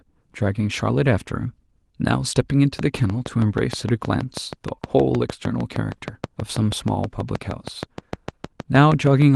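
From 2.79 s to 9.23 s a train of clicks runs over the speech: regular ticks at 6.38 per second, around forty in all, peaking roughly 10 dB above the signal and audible in pauses too, likely from electrical interference or a faulty connection, beneath light Opus voice compression.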